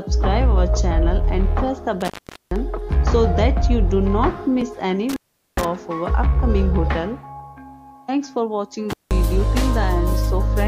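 A loose cable or plug connection opens briefly three times, an intermittent contact fault, breaking the signal path. From 2.01 to 2.56 s the line is open for about 0.43 s, from 5.09 to 5.65 s for about 0.41 s, and from 8.91 to 9.13 s for about 0.18 s. Each time the audio drops out abruptly, with crackle as the contact breaks and remakes, and faint hiss remains during each gap.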